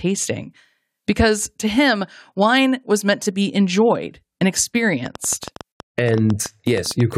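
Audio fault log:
5.06–7.13 s, train of clicks: right after "to be enjoyed and", a run of about twenty similar sharp ticks starts and continues to the very end, averaging close to 9 per second but with uneven spacing. They poke a few decibels above the speech and stay audible in the gaps too, so they're riding on top of the recording rather than part of it. The likely cause is interference from nearby gear or a faulty connection or power supply.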